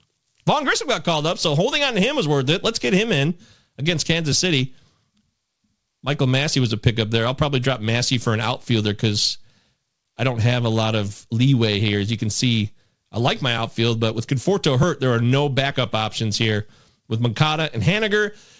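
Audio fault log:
No faults heard.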